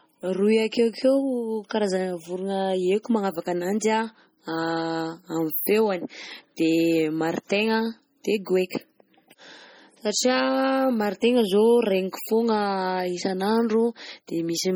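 From start to end, the speech sounds watery and swirly, and s sounds turn metallic and chirpy. This is likely heavy MP3 compression, which fits a bitrate near 32 kbps. Short of bits, the encoder drops weak frequency lines, so they flicker between frames.

At 6.56 s, a short hiss leads into a sharp attack. This is pre-echo. The codec spread noise meant for the loud attack across its whole block, so it filled the quiet 13 ms before it. The attack sounds smeared.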